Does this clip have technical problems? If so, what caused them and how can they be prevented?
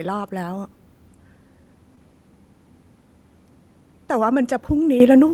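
Yes. Short concealed packet loss: around 1.95 to 1.99 s, about 20 ms of audio missed the decoder, and the receiver extended the preceding sound to bridge it, leaving a brief smear. A steadier network path, or forward error correction in the codec, prevents this.

Microphone volume stepped up: at 5.0 s the call software raised the input gain in one jump of about 10 dB, so speech and background suddenly get louder together. Setting a fixed microphone level beforehand and disabling automatic input gain adjustment prevents it.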